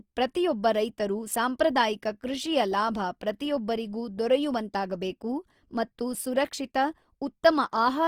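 From start to finish the speech carries plainly audible grain: it sounds rough and noisy rather than clean, with little of the hollow swirling MP3 gives. This is likely Opus compression in its music (CELT) mode at a low bitrate, around 24 kbps, filling starved bands with folded or noise-like energy. On a spectrogram the bands stay filled, without dark holes, extending up to about 20.2 kHz, but harmonics look smeared and speckled.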